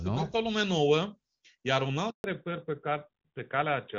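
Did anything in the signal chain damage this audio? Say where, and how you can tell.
Yes, two things, both on the network side of the call. Right after "lume nouă iar un" there's a handover gap from 2.10 to 2.24 s: the sound drops away fast and leaves 140 ms of silence. No frames arrived while the call switched links, so that stretch is just gone.

From 2.24 s to the end there's a fallback to narrowband. Before that the audio has the open top end of HD Voice, which fits AMR-WB at around 23.85 kbit/s. Afterwards nothing is left above 4 kHz, so it turns duller and rougher, consistent with a drop to AMR-NB at about 12.2 kbit/s.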